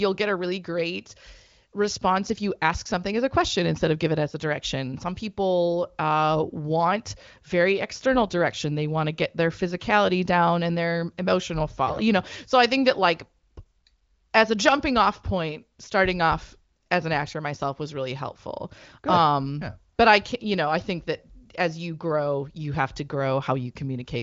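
No technical faults can be heard anywhere in the speech. It carries the character of the AMR wideband (HD Voice) codec, with nothing above about 7.5 kHz and at most faint coding traces, which fits one of its top bitrates.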